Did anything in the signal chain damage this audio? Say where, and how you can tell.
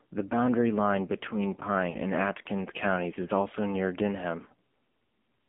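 Yes. The AMR narrowband mobile codec runs throughout, at the codec stage. The audio is confined to a telephone band of roughly 200 Hz to 3.4 kHz, with nothing above 4 kHz. The speech sounds plainly buzzy and synthetic, which fits a low AMR-NB mode near 7.4 kbps. Each 20 ms frame is rebuilt from a vocal-tract model excited by only a few pulses, so fine detail is replaced by a coarse, artificial texture.

Lost AMR speech frames occur from 1.90 to 1.98 s, at the network stage. A gap of about 40 ms, consistent with two consecutive 20 ms frames, shows up as a short warble and dip where the sound smears instead of continuing cleanly. Radio errors made those frames fail their checksum. The decoder then concealed them by repeating the last good pitch and vocal-tract settings at falling gain, and the speech returns weak or rough for a moment just afterwards.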